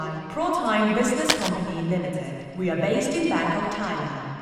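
From 1.29 to 1.49 s a burst of cable scratch noise cuts across the audio: a fifth of a second of harsh, crackling rustle, roughly as loud as the sound it sits on. It is likely caused by a worn cable or connector being moved, its contact resistance jumping erratically. On the waveform the trace turns dense and jagged with irregular spikes, and a spectrogram shows a ragged broadband smear.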